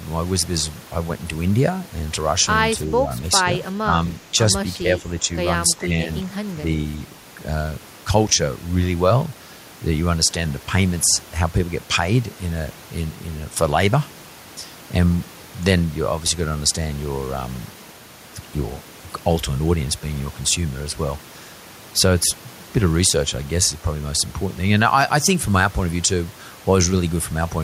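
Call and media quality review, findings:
Speech suppressed in double talk: four short dips in the speech at 3.73–3.93 s, 4.78–5.06 s, 5.77–6.07 s and 6.23–6.33 s, each a fraction of a second of affected audio, level pulled down by roughly 10 to 15 dB at worst. Likely cause: echo canceller during simultaneous talk, unable to tell the near talker from loudspeaker echo, so it attenuates both. Heard as level ducking.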